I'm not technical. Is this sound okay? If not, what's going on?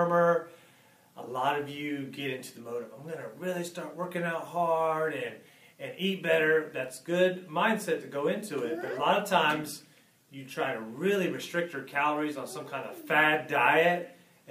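Yes, this sound is okay, and nothing in it points to a technical problem. There's nothing here that needs fixing.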